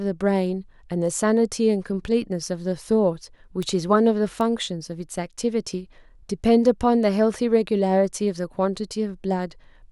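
A single sharp tick cuts through the speech at 3.63 s, and another at 4.41 s. Each is a bright, full-band click peaking at about -14 dBFS, with no link to the surrounding sound. These are bit error spikes: a flipped bit in memory or on a digital link throws one or two samples off by a power of two before the value snaps back. The first tick sounds consistent with a two-sample error and the second with a single sample.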